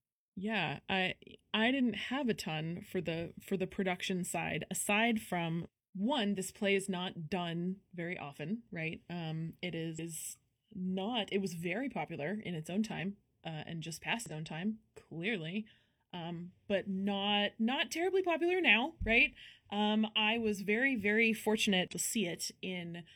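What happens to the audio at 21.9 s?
From 21.88 to 21.93 s there is damaged data in the compressed stream. The decoder misreads the corrupted frames, loses sync and hunts for the next valid frame header, producing a brief disruption of about 60 ms.

Underneath, as everywhere in the clip, channel delay causes comb filtering. One channel lags the other by a fraction of a millisecond, and summing to mono cancels energy at evenly spaced notches starting around 1.5 kHz, which gives the speech a hollow, phasey colour.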